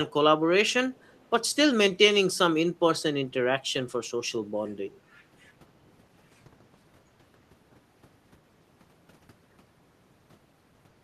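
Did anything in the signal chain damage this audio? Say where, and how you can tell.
Yes. From 0.94 to 1.26 s a faint copy of the speech trails 287 ms behind: echo leak, likely call-processing echo cancellation passing loudspeaker pickup back.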